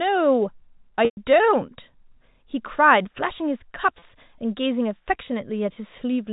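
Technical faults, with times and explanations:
1.05–1.17 s and 3.99–4.02 s, packet loss with pitch repetition: the 120 ms gap starts as a held, buzzy tone that fades to silence before the speech cross-fades back, while the 30 ms one is just a brief buzzy hold. Each time the receiver bridged missing audio by repeating the last pitch period, fading it out over about 50 ms.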